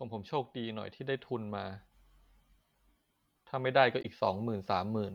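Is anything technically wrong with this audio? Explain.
Yes. From 4.01 to 4.05 s there is damaged data in the compressed stream: the decoder misreads corrupted frames, loses sync and hunts for the next header, leaving a brief glitch in the speech.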